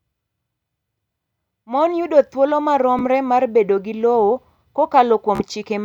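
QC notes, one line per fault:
2.99 s, Bluetooth stutter: between "yudo thuolo" and "mar bedo gi", about 14 ms of audio went missing and the receiver replayed its last buffered slice to fill the gap, giving a brief blip. The waveform shows one duplicated short segment, and the spectrogram shows a thin vertical seam.
5.35–5.42 s, Bluetooth stutter: about 42 ms was lost, which fits roughly three dropped packets. The same slice is repeated back to back, so it sounds like a short buzzy machine-gun stutter before the audio jumps ahead. The waveform shows identical repeating blocks, and the spectrogram shows evenly spaced vertical striping.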